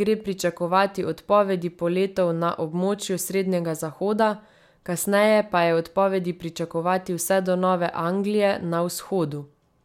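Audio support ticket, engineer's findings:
No faults found in this recording.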